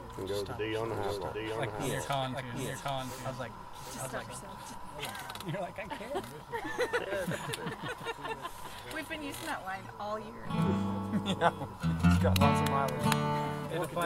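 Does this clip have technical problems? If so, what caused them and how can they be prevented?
Yes. From 0.84 s to 4.74 s the audio is doubled: a second full-band copy trails the original by roughly 0.7 s, a few decibels quieter, with no decay or room colour, and it cuts in and drops out abruptly at those times. This doubled audio track most likely comes from the same signal reaching the mix twice, once through a slower capture path or an edit leaving two offset copies. Monitor routing so each source is recorded only once.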